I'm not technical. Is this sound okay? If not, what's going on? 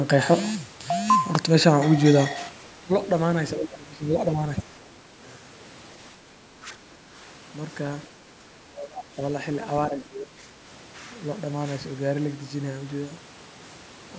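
No. At 2.49 s the volume was likely switched down in one step with no fade, so the speech and background suddenly get quieter together: a sudden gain jump that lasts to the end.

Speech is suppressed in double talk. The echo canceller likely mistook the talker for the other side's voice while both spoke, so the speech dips or drops out at 2.85–2.9, 3.57–4.12, 4.58–4.75, 6.57–7.13, 8.39–8.45, 8.66–9.19 and 9.88–10.57 s.

The other side's voice is leaking through. The canceller likely missed some loudspeaker sound, so a faint scrap of a second voice slips in at 4.79–4.9 s.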